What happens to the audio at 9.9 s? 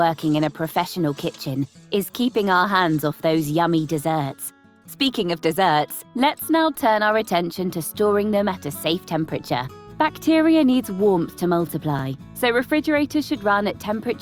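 Nothing goes wrong at 9.9 s; the audio carries straight through that moment with no dropout, click, glitch or other fault.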